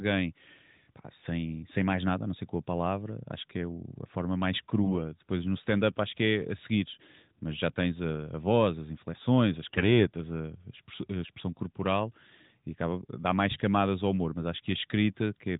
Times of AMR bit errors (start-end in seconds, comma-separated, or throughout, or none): 4.84-4.94, 9.70-10.07